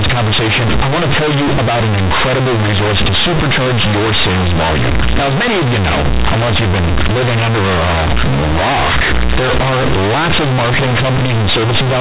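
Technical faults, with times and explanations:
Throughout, companded audio read as linear. The speech was stored as G.711 mu-law bytes, but those bytes are played as plain 8-bit samples with no expansion. Mu-law keeps the sign in the top bit, so every zero crossing jumps the output across about half its range. Quiet passages come out as loud as speech peaks. The result is harsh, buzzy distortion, with heavy noise filling the pauses. The band stops near 4 kHz, which fits the telephone path.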